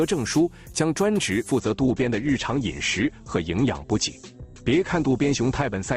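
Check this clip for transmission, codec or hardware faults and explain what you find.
One transmission fault is present. From 1.59 s to the end, the adaptive stream drops to a lower bitrate. A slowed connection forces a leaner encode, consistent with Opus falling from 64 to 16 kbit/s. Quality changes suddenly without a gap. Nothing remains above 8.2 kHz, so the treble sounds dull and codec artefacts increase.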